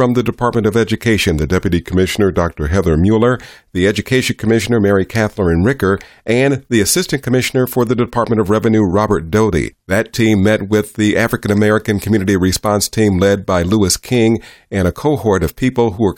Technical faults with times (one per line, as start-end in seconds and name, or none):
1.46-3.22 drift correction step